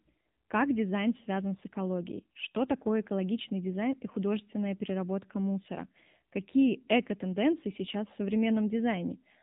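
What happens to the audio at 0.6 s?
The speech at 0.6 s, like the rest of the clip, has passed through the AMR narrowband mobile codec. It rebuilds the voice from a vocal-tract model fed with a few pulses per short subframe, and discards everything above 3.8 kHz. The result is muffled, telephone-like speech with a plainly audible buzzy, synthetic edge, which fits a low-rate mode around 7.4 kbps. Sibilants and breathy detail are dulled throughout.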